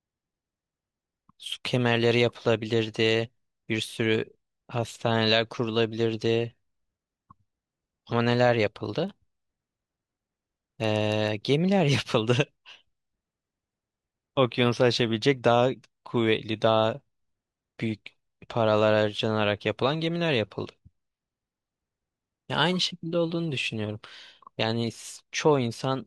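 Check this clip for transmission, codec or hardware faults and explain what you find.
One fault is present in this speech. Filter restarted on every block, 9.04 to 11.42 s: the filter drops its stored state at each block boundary and starts from silence, so every block opens with a small transient. These recur every 40 ms, producing a 25 Hz buzz that tracks the speech level.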